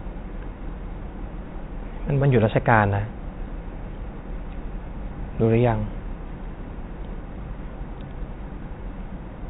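Nothing technically wrong can be heard in this speech clip. It carries the sound of G.711 telephone coding, with nothing above 4 kHz and a faint quantisation hiss riding about 38 dB under the speech and rising and falling with its level.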